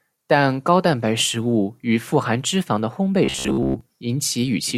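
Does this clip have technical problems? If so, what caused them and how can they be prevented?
Yes. From 3.25 to 3.81 s, right after "肪的烘培", the speech turns into a rigid metallic buzz at about 67 Hz that only loosely tracks the words. This is robotic sound from repeated short buffers, likely caused by audio arriving too slowly, so the playback side kept looping the last chunk, roughly 15 ms long, while fresh audio was skipped over most of that stretch. Larger jitter buffers and a steady, higher-priority audio thread would prevent it.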